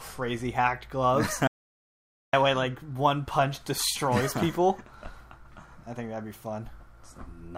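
From 1.47 to 2.33 s the sound cuts off abruptly into an audio dropout to silence lasting about 0.86 s, with no room tone, then resumes mid-flow. The input was likely lost through a disconnected device, failed link or stray mute. The waveform shows a flat line; the spectrogram, a blank vertical band.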